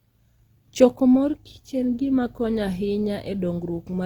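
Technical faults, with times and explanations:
Throughout, Opus compression: likely a low-rate Opus encode in its music mode, near 24 kbps, filling starved bands with noise, so speech turns rough and grainy while reaching about 20 kHz.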